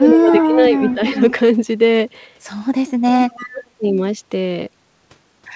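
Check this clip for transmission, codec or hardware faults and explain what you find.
Two problems turn up here: the speech gets pushed down in places, and a faint delayed copy of it leaks back in.

Speech suppressed in double talk: from 0.0 to 1.16 s the speech sags by about 10 dB, then drops out almost completely at 2.99–3.1 s and 3.4–3.65 s. It's likely an echo canceller ducking everything while both ends talked.

Echo leak: a quiet copy trailing the speech by 338 ms shows up at 0.08–0.48 s, 0.79–1.33 s and 3.22–3.64 s, likely loudspeaker pickup the far end's canceller didn't fully remove. The band-limited sound with nothing above 8 kHz fits a G.722 call path.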